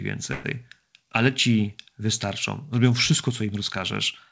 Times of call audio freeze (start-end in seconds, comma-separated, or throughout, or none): 0.32-0.47